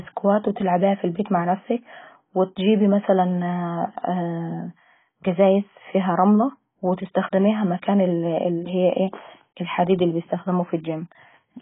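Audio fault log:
Throughout: AAC compression. The speech is dull and band-limited, with nothing above about 3.8 kHz, and sibilants sound smeared and warbly. This likely comes from AAC-LC at a very low bitrate, around 16 kbps, which lowered the cut-off and quantised the remaining bands too coarsely.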